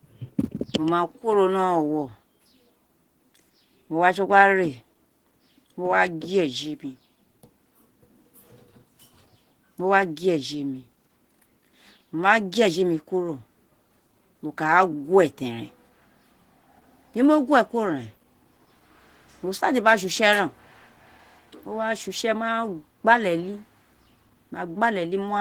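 Speech throughout, and it's muffled and hoarse from start to end, plainly audible Opus compression damage, likely from a low rate around 16 kbps in its hybrid speech mode.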